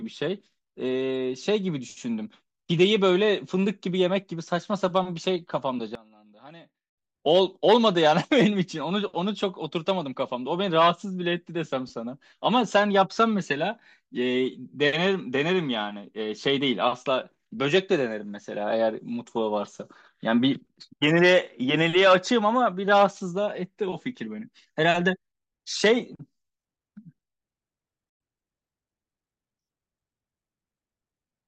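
A speech clip with two sudden gain jumps. From 5.95 to 6.98 s, the level drops by about 21 dB, voice and background together. At 28.10 to 28.20 s, it drops by about 23 dB. Each likely comes from a gain change applied without a ramp.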